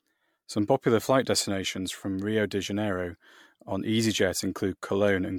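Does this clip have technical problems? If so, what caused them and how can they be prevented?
Yes. Throughout the speech there's a swirly, smeared, hollow quality, and consonant attacks sound blurred, with nothing above about 19.8 kHz. That pattern is likely generation loss: the audio seems to have gone through MP3 roughly seven times at around 100 kbit/s. Each decode and re-encode quantises on a shifted frame grid, so the noise and spectral holes pile up beyond what a single pass at that rate would give. To prevent it, keep a lossless master for editing and encode to MP3 only once, at the very end.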